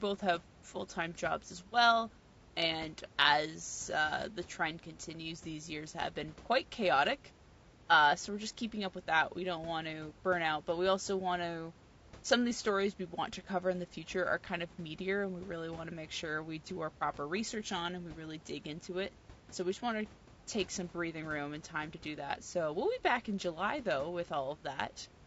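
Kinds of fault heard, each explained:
Low-delay AAC compression: The speech sounds rough and grainy throughout, with noise between the harmonics. This likely comes from short-frame AAC-ELD coding at a low bitrate, around 32 kbps.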